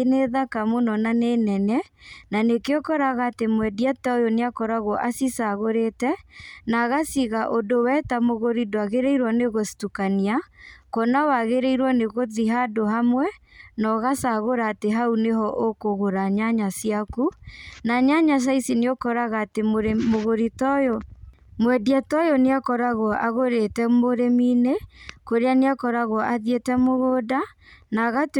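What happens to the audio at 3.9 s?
Nothing goes wrong at 3.9 s: the speech there runs on without any dropout, glitch, click or other audible fault.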